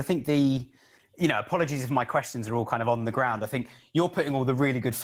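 From start to end the speech carries Opus voice compression, plainly audible, in a character that fits roughly 16 kbps. The lower band sounds coded by linear prediction, giving the speech a hoarse, faintly robotic edge from coarsely quantised excitation, while a separate transform layer fills the top. Because the band stays wide instead of closing at 8 kHz, this is not plain bandwidth limiting; the damage lies in texture, not a missing top end.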